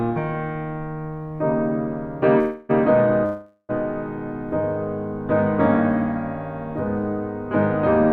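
At 2.39 s the music stalls into a smeared, fading buzz for about 0.3 s before picking up exactly where it left off at 2.71 s. That's a call audio freeze, likely packets held up in transit until the jitter buffer ran dry. A longer one follows from 3.25 to 3.71 s, about 0.44 s of fading fill that drops to silence for roughly 60 ms. Nothing is lost either time, but each freeze pushes the rest of the music later.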